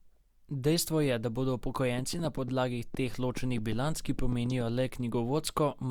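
Something, likely interference from nearby equipment or a faulty connection, injects a train of clicks from 1.99 to 4.62 s, just after "je da bodo": about fifteen similar pulses at an uneven pace averaging 5.3 per second, ticking well above the speech level and into pauses.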